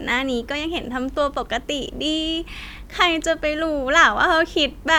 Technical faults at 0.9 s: none

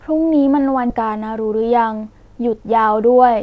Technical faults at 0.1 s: none

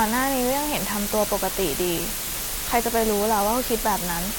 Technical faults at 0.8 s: low bit depth with dither

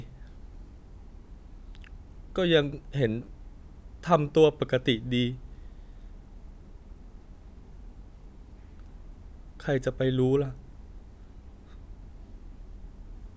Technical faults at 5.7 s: none

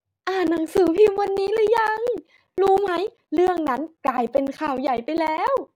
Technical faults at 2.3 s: periodic USB or driver dropouts

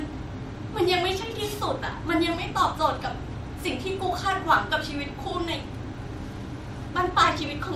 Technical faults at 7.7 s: generation loss

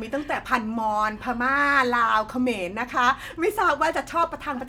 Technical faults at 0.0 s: none

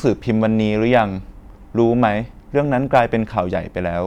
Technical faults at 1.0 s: hard clipping

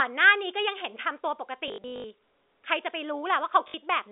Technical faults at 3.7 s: packet loss with last packet repeated

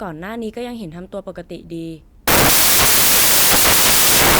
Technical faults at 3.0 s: samples built from the wrong bytes

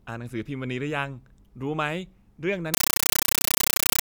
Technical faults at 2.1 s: none

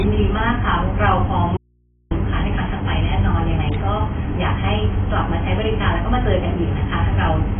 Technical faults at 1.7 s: low-bitrate audio saved at a high bitrate; audio dropout to a faint residue

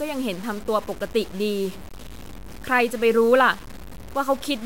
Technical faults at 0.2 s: low bit depth without dither

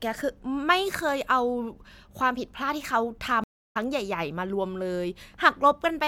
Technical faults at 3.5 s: stream reconnect

